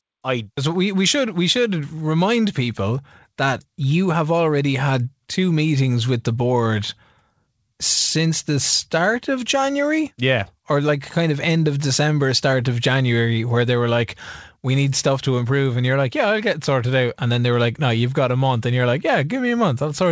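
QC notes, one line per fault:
No faults are present in this speech recording. It has come through a call path whose codec leaves nothing above 8 kHz, which fits G.722 at 64 kbps.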